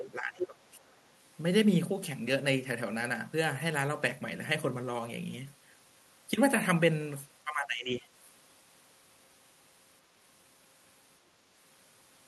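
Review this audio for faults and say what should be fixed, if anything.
Speech suppressed in double talk appears twice. From 0.00 to 0.61 s the speech sinks by around 20 dB, and from 7.44 to 8.06 s it dips again by around 15 dB for about half a second. The likely cause is an echo canceller that, with both ends talking together, could not tell this talker from the returning loudspeaker echo and attenuated everything at once. To prevent it, tune the canceller's double-talk detection to hold near-end speech while the far end is active.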